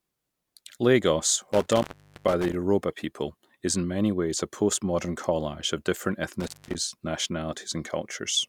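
At 1.53 s the speech drops out through an intermittent contact, a loose cable or plug briefly opening the line. The signal vanishes for about 0.42 s, with crackle at the break and the remake, and faint hiss in between. A second, shorter opening at 6.40 s silences the line for roughly 0.2 s.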